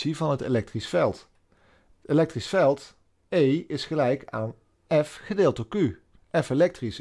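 No technical faults can be heard anywhere here.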